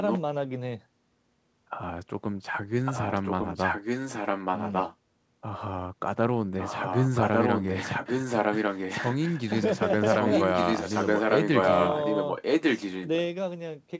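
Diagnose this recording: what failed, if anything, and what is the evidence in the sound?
Echo leak in call processing. Speech repeats about 1.15 s late at 0.07–0.21, 2.85–4.96, 6.59–9.53 and 10.04–13.07 s, about 5 dB quieter than the original in the first and roughly as loud as it in the rest. Likely a far-end echo canceller passing loudspeaker pickup.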